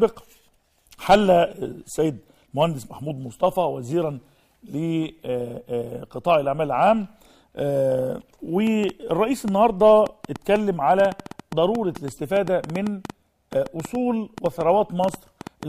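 From 8.67 s right through to 15.64 s there's a train of clicks riding over the sound, around 40 of them at roughly 5.75 per second but unevenly spaced, peaking about 10 dB above the signal. It's likely interference from nearby gear or a faulty connection or power supply.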